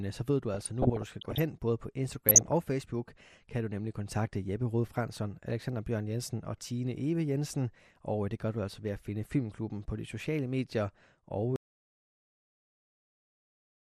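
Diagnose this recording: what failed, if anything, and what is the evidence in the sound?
The speech sounds dull and gurgly throughout, with a granular grit and the top end thinning out. This is codec damage, likely from MPEG Layer II (MP2) compression at a low rate, consistent with about 80 kbps, where starved upper sub-bands switch off and the remaining bands are coarsely quantised.

Burbling distortion covers the sound from 0.54 to 1.40 s, right after "øh så ved du", and again from 2.29 to 2.52 s, following "både på". This is DAB burbling in the transmission path. Weak reception let a small fraction of bit errors past error correction, corrupting the audio data so short blips of noise appeared in individual sub-bands.

At 11.56 s the sound cuts off mid-flow and stays in dead digital silence, with no room tone, until the clip ends. This is an audio dropout to silence. Most likely the input feeding the recorder was lost, and the recorder kept writing silence from that point.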